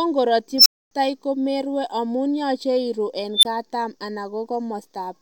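Twice a recursive filter in the speech path went unstable, its feedback driving the output upward without bound. From 0.58 s to 0.91 s a whine around 5 kHz swells over about 76 ms into harsh clipping. Numeric overflow then mutes everything for 255 ms until the filter resets. From 3.35 s to 3.45 s the same unstable filter rings up near 4 kHz within 81 ms, squeals very loud, and cuts to a brief 23 ms gap.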